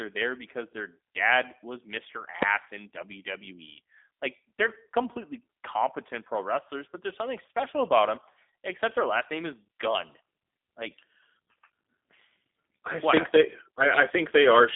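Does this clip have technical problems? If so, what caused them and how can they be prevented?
Yes. The audio went through the G.729 codec, an 8 kbit/s VoIP coder that rebuilds speech from a vocal tract model and a few pulses per frame. Nothing passes above 3.8 kHz, so the speech sounds muffled, rough and slightly synthetic throughout. To prevent this, use a wideband codec such as Opus or G.722 wherever the link allows it.

Invalid numbers at full scale happened at 2.42 s and at 13.17 s, just after "I what". A calculation produced infinite or undefined values that were clamped to maximum amplitude for about 2.7 ms, which fits a 128-sample processing block. Each one is heard as a single loud bang. To prevent this, check each block for non-finite values, then mute or replace those blocks before output, and guard the divisions and filter states that can overflow.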